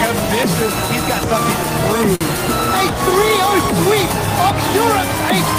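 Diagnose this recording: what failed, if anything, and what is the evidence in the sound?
From 2.15 to 2.24 s one sound is held too long: a short stall from a late packet. The network jitter buffer emptied and stretched 52 ms, and nothing was lost.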